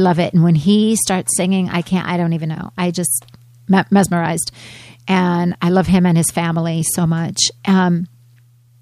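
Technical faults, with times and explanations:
No technical faults can be heard in this speech recording. Nothing in the audio calls for a time or an explanation.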